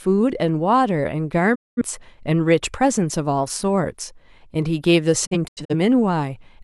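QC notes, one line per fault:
1.54–1.82 s, digital broadcast dropout: speech fades out over 20 ms to silence for about 213 ms, then resumes; the receiver muted after losing frames, which fits roughly five corrupted frames.
5.25–5.74 s, digital broadcast dropout: speech breaks into several short holes across about 430 ms, the longest 85 ms; intermittent failed frames kept muting the receiver, and that audio is lost.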